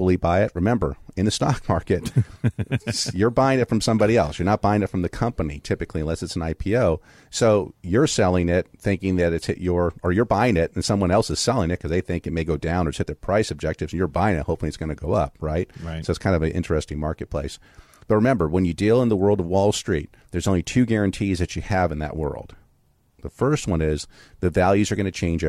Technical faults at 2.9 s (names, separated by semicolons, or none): none